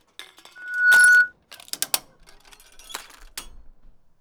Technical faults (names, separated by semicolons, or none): loudspeaker feedback squeal